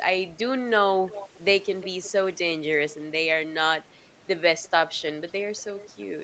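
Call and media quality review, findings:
Echo leak at 1.81–1.87 s: brief delayed copy of the speech, roughly 360 ms behind the original, well below the main signal, around 15 dB down. Likely cause: far-end loudspeaker playback picked up by that side's microphone and not fully removed by its echo canceller, so a residual scrap returned through the call. Short and faint. Band limit at 8 kHz consistent with an Opus call path, roughly 32 kbps.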